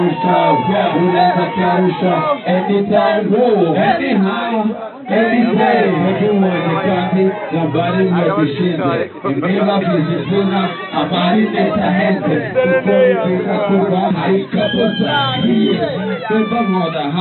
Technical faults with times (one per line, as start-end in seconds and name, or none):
none